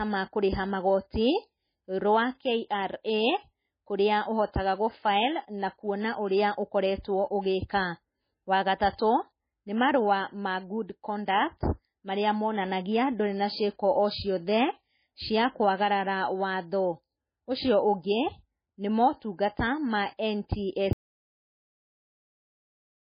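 From the first second the speech carries heavy damage from what is likely MP3 compression at a very low bitrate, which the sound suggests is around 18 kbps. Nothing reaches above 5 kHz, so s sounds lose their bite, and the remaining tone has a watery, swirling quality as weak frequency lines drop in and out between frames. This differs from a plain low-pass filter: a filter would dull the sound evenly, while this treatment also makes the texture shimmer and chirp.

From 7.02 to 7.04 s, a sharp attack is preceded by a short burst of hiss lasting about 21 ms. This is pre-echo. The codec spread the quantisation noise meant for the loud onset across its whole block, including the quiet moment just before it. The smear arrives ahead of the sound rather than after it, and that is what separates it from reverb or a ringing tail.

At 20.93 s the speech cuts off mid-flow and silence runs to the end of the clip. 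The likely cause is that the input was lost while recording continued, writing silence. This is an audio dropout to silence. It is not a pause or a quiet passage, because all room tone and noise floor vanish together. A gated or faded ending would taper rather than stop dead.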